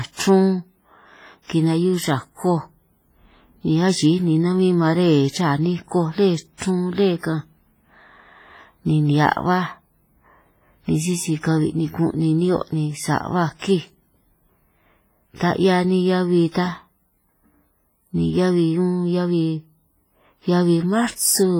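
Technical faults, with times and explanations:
Throughout: WMA compression. The speech carries a ringing, washy quality with a hiss that rises and falls along with the voice, and fine detail between louder sounds is thinned out. This is likely a low-bitrate Windows Media Audio encode. The heavy damage fits a rate around 24 kbps. Its transform coder spreads quantisation noise over long blocks and drops weaker spectral lines altogether, leaving the smeared, metallic texture heard across the clip.
6.58 to 6.60 s: pre-echo. A brief burst of hiss, about 26 ms long, runs just ahead of a sharp onset, and the attack itself sounds blunted rather than crisp. The transform coder sizes its quantisation noise for the loud part of a block and spreads it evenly across the whole block, so the quiet moment before the attack fills with noise meant for the louder sound that follows.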